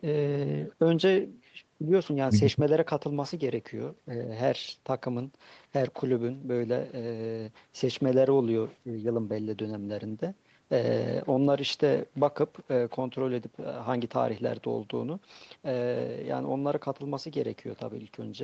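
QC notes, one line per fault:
No faults found: the speech carries nothing above 8 kHz, which fits the bandwidth limit of an Opus call codec after call microphone processing.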